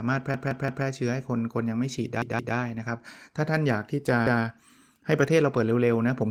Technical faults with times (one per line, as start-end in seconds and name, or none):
0.34-0.85 repeated buffer
2.22-2.56 repeated buffer
4.27-4.44 repeated buffer